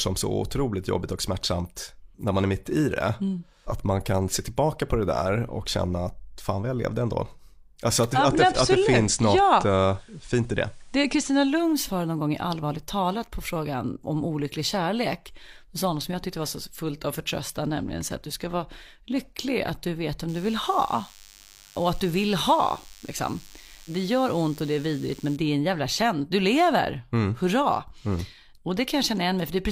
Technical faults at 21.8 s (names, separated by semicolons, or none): DECT cordless phone buzz